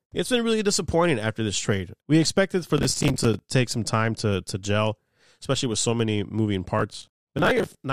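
Speech with processor overload crackle from 2.78 to 3.39 s and 6.79 to 7.75 s: dozens of missed buffers of roughly 10 ms each replay stale audio, giving gritty tearing rather than clean silent dropouts.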